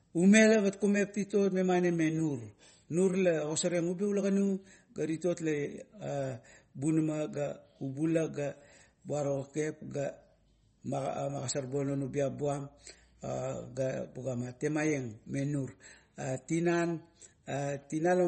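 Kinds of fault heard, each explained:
MP3 compression: The speech has a plainly audible watery, swirling quality, with s sounds turning metallic and chirpy and consonant attacks smeared, all of it likely from MP3 encoding at a low bitrate, which fits roughly 32 kbps. Short of bits, the encoder removes the treble and drops quiet frequency lines. On a spectrogram, nothing appears above a hard ceiling at 8.4 kHz, and the upper band shows patchy holes that flicker on and off from frame to frame.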